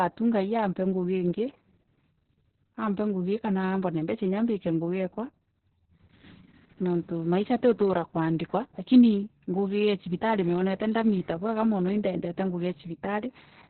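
Speech, with heavy Opus voice compression throughout: nothing survives above 4.2 kHz, so the audio is muffled narrowband, and the coarsely coded excitation makes it hoarse and slightly robotic. That points to SILK running at a very low bitrate, around 6 kbps.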